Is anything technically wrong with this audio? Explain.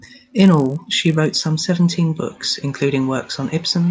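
Yes. From 0.0 to 1.5 s the resampler restarted on every block: each 20 ms block was converted separately, so its edges lacked true neighbouring samples. The edge errors recur at 50 Hz, heard as a buzz under the speech, consistent with a 44.1 kHz to 16 kHz conversion.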